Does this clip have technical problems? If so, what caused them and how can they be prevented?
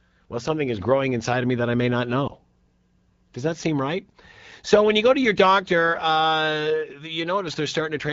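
Yes. There is one case of lost AMR speech frames, at 2.27 to 2.31 s, just after "that I may not". The sound dips and warbles briefly, which fits a single lost 20 ms frame. Radio errors made the frame fail its checksum. The decoder then repeated the last good pitch and vocal tract settings at reduced gain, and the speech recovers almost at once. The AMR-WB (HD Voice) codec around it, at 12.65 kbit/s, adds only light coloration. Stronger radio coverage or more robust channel coding would prevent this.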